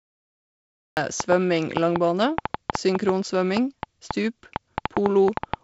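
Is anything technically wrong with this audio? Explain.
Yes, two faults stand out.

From 0.0 to 0.97 s there is pure digital silence, then a cut-off start at 0.97 s. The capture began late, so the speech appears mid-sound with no attack. The waveform shows a flat line ending in an abrupt wall, and the spectrogram shows a sharp vertical edge.

From 1.20 to 5.55 s a train of clicks runs over the speech and its pauses, about 5 per second at an irregular pace, around twenty in all, peaking roughly 15 dB above the signal. It is likely interference or a struggling interface. It sounds like uneven ticking, and appears as thin spikes on the waveform and as vertical lines spanning the spectrogram, all the way up to its 7.7 kHz ceiling from the wideband G.722 coding.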